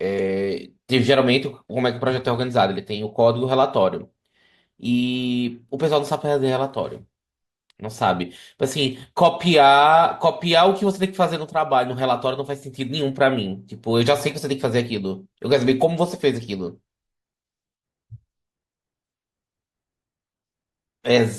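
No technical faults can be heard anywhere in the speech recording, with the signal continuous and steady throughout.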